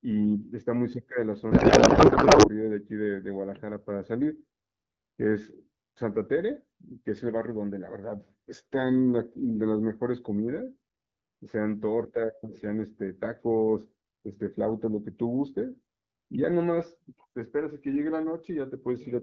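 From about 1.51 to 2.50 s the speech turns into garbled noise and warble that barely tracks what's being said. That's a codec payload misread. The sender packed its AMR frames octet-aligned, but the receiver unpacked them as bandwidth-efficient, so every field lands a few bits off and the decoder rebuilds nonsense from valid-looking frames. Either side of that stretch the HD Voice wideband codec sounds clean, which fits AMR-WB running at around 12.65 kbit/s.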